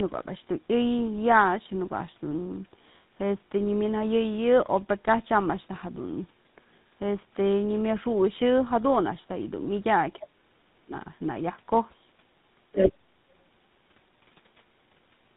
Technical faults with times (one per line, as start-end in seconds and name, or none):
0.00-15.37 tandem speech coding
10.18-10.92 speech suppressed in double talk
12.72-12.93 other side's voice leaking through